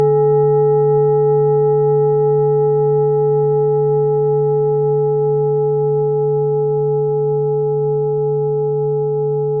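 No technical faults can be heard anywhere in the recording, and the signal holds steady throughout.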